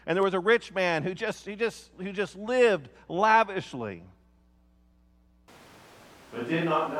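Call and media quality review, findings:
Abrupt shift to roomy, hollow sound at 5.48 s, persisting to end. Likely a switch to a distant microphone: thinner bass, reverberant tails, no real level drop, room noise about 25 dB under speech. Spectrogram: weaker low band, smeared decays, higher noise floor.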